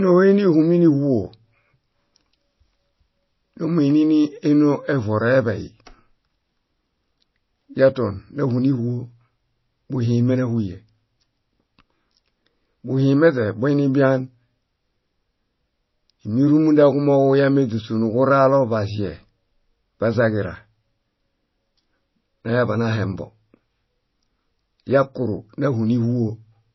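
Speech throughout the clip sounds dull and watery, with nothing above 5.8 kHz, so s sounds lose their hiss and turn swirly and metallic, and consonant attacks blur. This is likely MP3 compression at a low bitrate, consistent with roughly 24 kbps. With so few bits, the encoder discards the treble above a fixed cut-off and drops quieter frequency components that flicker in and out from frame to frame, producing the warbling texture.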